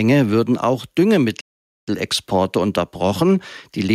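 A playback stall cuts the audio to silence from 1.41 s to 1.88 s, about 470 ms, likely because the player ran short of data or its thread was blocked. A momentary dropout would last only milliseconds. This gap holds much longer.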